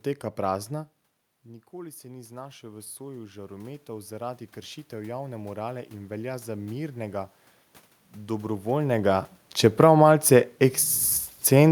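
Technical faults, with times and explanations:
1.7–7.39 s, automatic gain rising: the input drops about 16 dB, so the gain climbs about 13 dB, swelling the voice and room noise together.
8.8–10.04 s, automatic gain falling: after the talker moves, the gain eases down about 5 dB, so the voice and background sink together.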